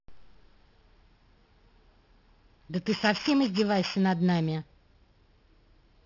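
A speech recording carrying aliasing from start to finish: it was taken from 16 kHz down to 12 kHz without an anti-aliasing filter, so energy above the new 6 kHz limit folds back below it at wrong, unrelated frequencies, fairly strong at around 10 dB under the wanted signal. Sibilants sound gritty and metallic. On a spectrogram the content runs hard up to 6 kHz with no roll-off, and mirrored bands of fricative energy fall downward from that edge.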